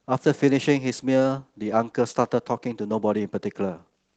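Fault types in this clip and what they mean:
No faults present in this speech clip; the voice-mode Opus coding audible throughout shows only light compression texture across the full band.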